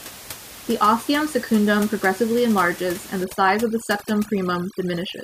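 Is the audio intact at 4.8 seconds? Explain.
No, overdone noise removal runs from 3.24 s to the end at 5.23 s: an over-strong reducer mutes bands near its noise estimate, leaving twinkling specks in the background.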